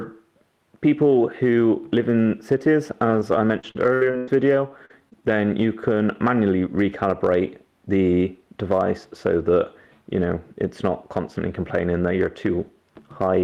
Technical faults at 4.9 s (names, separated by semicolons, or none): repeated packet loss (robotic sound)